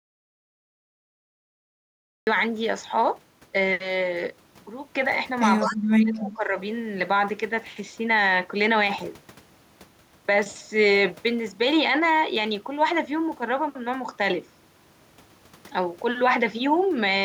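The input was likely lost, perhaps to a disconnected device or a stray mute, while the recorder kept writing silence. This audio dropout to silence is already under way when the clip opens and runs to 2.27 s: silence, with no room tone, before the speech cuts in.

At 5.6 to 5.72 s there is a brief echo leak. A far-end loudspeaker's echo canceller likely failed to remove what its microphone picked up. The result is a scrap of the voice repeated about 199 ms late, roughly 20 dB below the speech.

From 5.62 to 6.56 s the speech is suppressed in double talk. With both sides likely talking at once, the echo canceller could not tell its own talker from the loudspeaker echo and turned both down. The voice dips, falling by around 25 dB at its deepest, for about 0.7 s in total.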